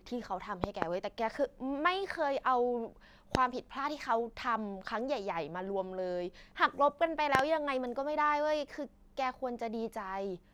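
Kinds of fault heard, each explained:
Loud pop: a sudden voltage pulse, likely from a plug, switch or static, heard as sharp thumps at 0.64, 3.35 and 7.35 s, two of them doubled, about 20 to 25 dB over the speech. Waveform: tall narrow spikes; spectrogram: thin full-height vertical lines.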